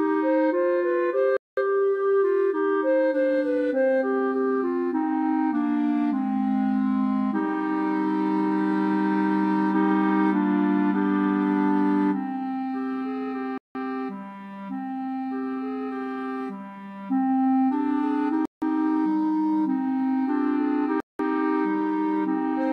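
At 1.37, 13.58, 18.45 and 21.0 s the sound drops to dead silence for roughly 0.16 to 0.21 s, then carries on. That pattern points to a Bluetooth stall, likely interference delaying packets until the headphone buffer emptied and playback paused.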